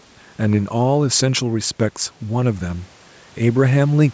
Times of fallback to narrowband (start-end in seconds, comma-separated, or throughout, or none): none